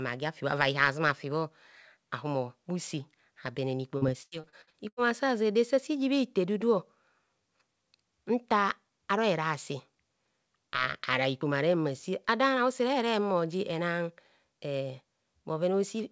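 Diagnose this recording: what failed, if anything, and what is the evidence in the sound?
The network stage failed: from 3.98 to 5.00 s there's repeated packet loss, with that robotic sound. Seven gaps, the longest 91 ms, get patched by extending the previous audio, so about a third of that second is concealed and choppy. The 8 kHz ceiling fits a G.722 call codec.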